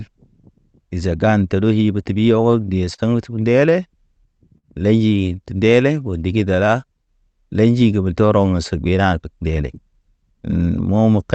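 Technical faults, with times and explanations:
2.41 to 6.57 s, jitter buffer slow-down: The speech runs at about 98% speed with the pitch unchanged. The receiver's buffer was low, so it repeated single pitch periods and small pieces of pauses many times over. This adds 106 ms of playing time across the stretch. Sounds are drawn out slightly. A faint warble can come from the repeated periods. The effect is gentle, but the pace sags compared with the rest of the clip.
2.52 to 3.01 s, repeated stalls (stutter): Three separate times the buffer ran dry because packets arrived late. Each time the receiver held the last sound going until audio came in again. The fills total 60 ms, and the longest is 40 ms. They cover about 12% of this half-second. Nothing is lost, but the speech catches and drags in short hitches, giving a stuttering rhythm.
4.58 to 4.66 s, short stall from a late packet: A single packet came late. 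The receiver stretched the current sound by 54 ms to bridge the wait, then carried on from the same point. No audio is missing. One sound is held unnaturally long, with a slight buzz or dip where the extension was synthesised. The delay grew by 54 ms.
8.58 to 9.52 s, jitter buffer speed-up: Audio had piled up in the buffer, likely after delayed packets arrived together. To bring the delay back down, the receiver cut out short runs of one or a few pitch periods over and over, roughly 150 ms in all. Speech plays at about 113% speed with the pitch unchanged. This part sounds hurried compared with its surroundings.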